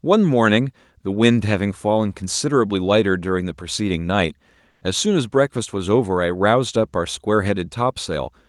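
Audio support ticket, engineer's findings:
Comfort noise in place of the background, 4.69 to 4.81 s (120 ms). Real room tone is swapped for steady, featureless hiss, about 2 dB quieter, in a background sitting about 43 dB under loud passages. Likely Opus DTX at the sender. No silent hole, so not a dropout; texture lost without pumping, so not a gate. Whole clip carries Opus coding noise, band topping out at 12 kHz.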